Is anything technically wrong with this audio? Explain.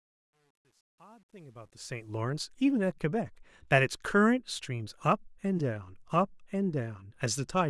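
Yes. Truncation distortion on the fade-in, 0 to 2.18 s, is gritty, worst until 1.63 s. The fade stage kept too few bits, which fits roughly 10-bit resolution, with no dither. Unlike hiss, the grit tracks the rising level and clears as the fade completes.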